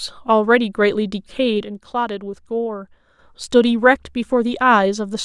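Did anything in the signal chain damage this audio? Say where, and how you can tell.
Yes. A digital gain stage likely applied a level change without a ramp, a sudden gain jump: at 1.63 s the speech and its background noise drop together by about 6 dB, consistent with a one-bit shift, then snap back at 3.19 s, with no gradual transition either way.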